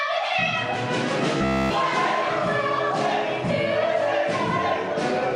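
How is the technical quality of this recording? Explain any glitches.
One glitch stands out: from 1.38 to 1.74 s the sound turns into a rigid, metallic buzz at about 67 Hz, throughout that span. This is robotic sound from repeated short buffers. The likely cause is audio arriving too late, so one fragment of roughly 15 ms is repeated in place of the missing audio. Unlike a dropout, nothing falls silent. The gap is filled with a fixed-rate buzz.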